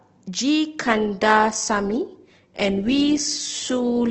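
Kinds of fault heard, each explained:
Adaptive stream at a lower bitrate: from about 0.83 s to the end, the speech suddenly picks up more codec artefacts, with no gap. That sounds like the stream dropping from a comfortable Opus rate to something near 12 kbit/s.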